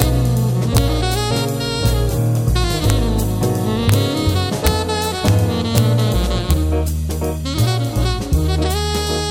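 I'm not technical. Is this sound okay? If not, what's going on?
No. Integer overflow causes sharp cracks at 0.02, 0.77, 2.90, 3.89 to 3.94, 4.67, 5.28, 5.78 and 6.51 seconds. Digital audio has a ceiling on how loud a number can be. Here, when the loudest moments went past it, the value wrapped around to the opposite extreme instead of stopping at the top. Each wrap makes a sudden violent snap, harsher than ordinary distortion, with the longest one around 3.9 seconds.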